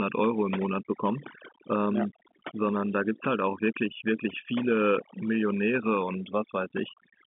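Throughout, overdone noise removal is at work: a noise reducer set far too strong cuts individual frequency bands whenever they sit near its noise estimate, taking quiet speech detail with them. Pauses drop to near silence with twinkling specks.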